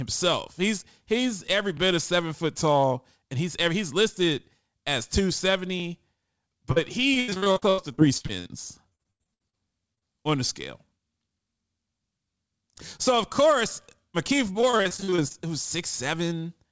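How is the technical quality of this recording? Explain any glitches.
The recording has three kinds of transmission glitch, concentrated between 7 and 10 s and again near 15 s. The audio carries G.722 call-codec coding noise and has no content above 8 kHz, consistent with a 64 kbps wideband link.

At 1.77–1.80 s there are overlapping chunks. A new processing chunk started before the previous one finished, so about 23 ms of audio plays twice at the join. It is heard as a single click or stutter, at a position consistent with 4 s chunk boundaries.

Short concealed packet loss occurs at 6.72–6.78 s and in two adjacent holes at 9.95–10.03 s. In each, roughly 20–40 ms never arrived, and the decoder extrapolated the last sound before crossfading back. The result is a brief smear or wobble, and short consonants may drop out.

Repeated packet loss (robotic sound) spans 7.14–8.51 s, 8.89–9.55 s and 14.53–15.36 s. 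Holes recur every few tens of milliseconds, with the longest near 90 ms, and concealment fills about a third to two-fifths of each stretch. The patched audio sounds choppy, with missing fragments.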